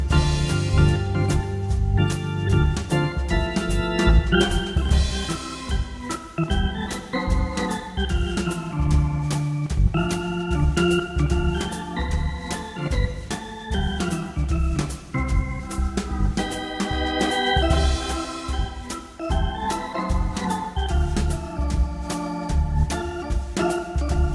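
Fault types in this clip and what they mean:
No faults can be heard anywhere in this audio.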